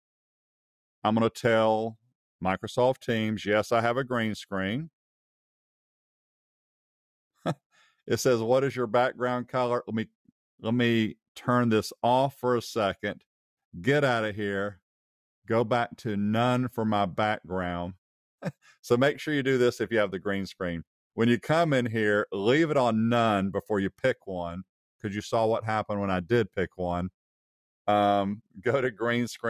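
Three spots where the sound got cut by the noise suppressor: around 1.93 to 2.13 s, 23.91 to 24.28 s, and 28.38 to 28.66 s. The suppressor mistook real sound for noise and pulled it down, by about 22 dB at its deepest in the first and last dips and about 13 dB in the middle one. Each dip lasts a fraction of a second, so you hear the level sag briefly and then come back.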